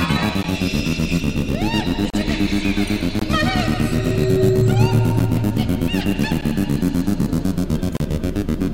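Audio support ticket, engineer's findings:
Block of digital silence, music, at 0.43 s, 2.10–2.14 s, 3.19–3.22 s, 4.15 s, 5.19 s, 6.41 s and 7.97–8.00 s. Hard cuts to silence, ticks to short holes. Gaps of 11.61, 23.22 and 34.83 ms fit one to three missed 512-sample buffers. Likely output buffer underrun.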